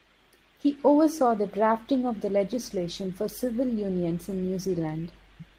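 A speech recording carries clock drift between sender and receiver across its whole length. The sender's clock runs roughly 5 percent slow, so the receiving jitter buffer keeps draining and must be topped up. On a spectrogram the harmonics and formant tracks look slightly stretched in time. On the waveform, syllable onsets arrive progressively later than a steady rhythm would place them. The result is a faintly dragging, unsteady pace. From 0.36 s to 5.5 s this shows up as repeated timing corrections. The receiver keeps inserting short repeated slices, about 200 ms in total, so the speech plays at roughly 96 percent of its natural rate. The insertions are unevenly spaced and heard as small hiccups. On the waveform they appear as brief duplicated cycles at irregular points. On the spectrogram they show as tiny horizontal stutters where a harmonic pattern repeats instead of moving on. Between 1.28 s and 2.72 s there are also scattered short gaps, around seven of them, each about 10 ms or shorter, adding up to roughly 40 ms. 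Each hole was patched by carrying the preceding sound forward, so nothing drops to silence. Instead you hear faint ticks or smears. A spectrogram shows these as thin slivers where the spectrum freezes momentarily, and the waveform shows small seams where the repeated cycle rejoins the real signal.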